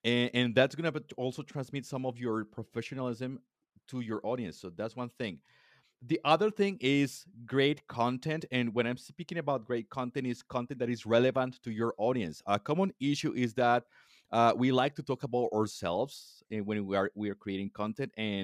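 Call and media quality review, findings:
No faults found in the speech recording. Nothing audible calls for a ticket entry.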